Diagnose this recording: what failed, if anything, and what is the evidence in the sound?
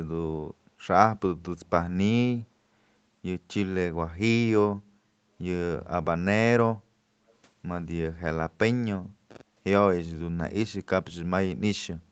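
A brief echo leak in the call processing stage: the far end was most likely on a loudspeaker, and its echo canceller let a small residue of the returned signal escape. At 7.28 to 7.33 s a faint, delayed copy of the speech surfaces, trailing the original by 466 ms and sitting very low, roughly 40 dB under the direct speech. It is a short scrap rather than a sustained echo, riding on audio already band-limited to 8 kHz by the call path.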